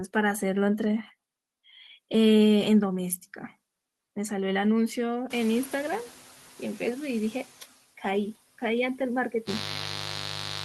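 Noise suppressor catching up from 5.3 to 7.15 s in this speech recording: room noise jumps by about 20 dB around 5.5 s, and the suppressor's noise estimate needs about 1.85 s to follow, so the noise first passes with too little reduction before sinking by about 5 dB. Mains buzz from 9.44 s to the end: sharp switching spikes twice per 50 Hz cycle, likely from a dimmer, rectifier or missing shield, produce a raspy buzz only somewhat quieter than the speech.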